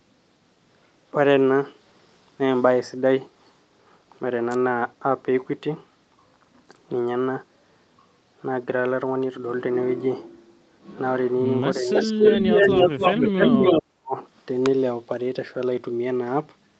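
A speech recording, band-limited to 8 kHz by normal call microphone processing, with three fault types. An electrical switching spike shows up as a sharp snap at 4.51 to 4.55 s and again at 14.66 s, most likely arcing from a nearby switch or motor. These are isolated broadband transients sitting on top of the audio, unlike the level changes below. Speech suppressed in double talk pulls the talker down from 11.79 to 12.61 s, dipping by about 15 dB over roughly 0.7 s, and again from 13.79 to 14.15 s, where it nearly vanishes, falling by about 40 dB for around 0.3 s. These are gated dips in the wanted voice rather than added noise, likely from an echo canceller clamping both directions while the two sides overlapped. An echo leak from 11.95 to 13.82 s adds a delayed copy of the speech trailing by 284 ms, at a level about 5 dB above the talker's own. The fixed lag and the repeated speech set it apart from the suppression dips.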